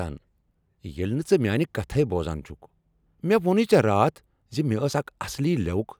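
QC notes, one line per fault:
No faults found in this speech clip. Nothing here needs a timestamped entry.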